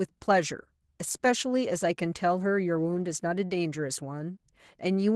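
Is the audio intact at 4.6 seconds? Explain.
No. Opus voice compression runs throughout, its low bitrate (consistent with about 16 kbps) coarsely coding the excitation, so the speech sounds muffled, hoarse and slightly robotic.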